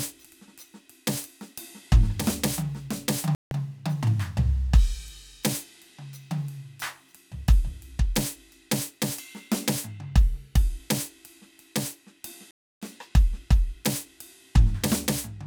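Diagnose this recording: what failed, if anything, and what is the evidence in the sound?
Music goes silent at 3.35 s for 0.16 s and at 12.51 s for 0.31 s, then resumes: likely a Bluetooth stall draining the headphones' playback buffer.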